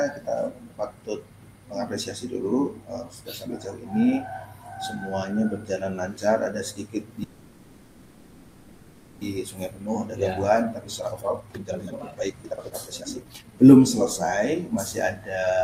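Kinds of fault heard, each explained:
call audio freeze: From 7.23 to 9.23 s the sound stalls and about 2 s of continued buzz or hiss fills the hole, likely because delayed packets drained the jitter buffer. Playback then resumes exactly where it stopped, so nothing is lost but everything after arrives later.
jitter buffer speed-up: From 10.28 to 13.99 s the sound runs at about 150% speed, and from 15.36 s to the end at about 116%, with pitch unchanged. Removing short pitch-period slices trims roughly two seconds, then a brief sliver, so it sounds hurried.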